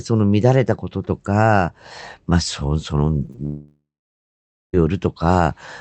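Brief smears and wobbles at 3.25 s, 3.31 s and 3.36 s are short concealed packet loss: about 20 ms of the speech went missing each time, and the receiver extended the preceding sound before blending back. From 3.45 s to 4.75 s the speech turns into a fading buzz, then roughly 0.9 s of silence, and resumes with that stretch gone. This is most likely a long network dropout in which about 1.3 s of audio never arrived.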